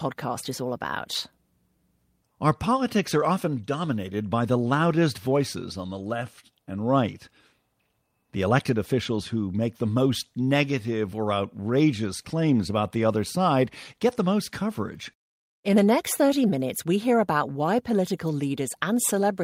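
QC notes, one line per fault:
No technical faults were found anywhere in the signal path of this speech recording.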